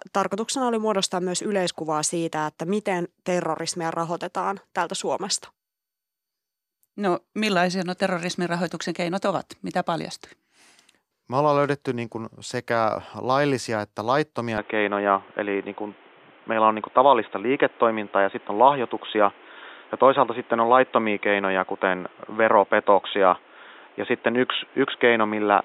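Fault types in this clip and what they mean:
Input switched to a poorer device: from 14.58 s, right after "kuin sekä laillisia että", the speech suddenly loses everything above 3.8 kHz and stays dull to the end, with no gap at the change. The level shifts by around 5 dB and a new noise floor appears, roughly 30 dB below the speech. This is likely a change to another microphone or a headset call profile. A plain filter or codec band limit would narrow the sound without adding its own noise and level step.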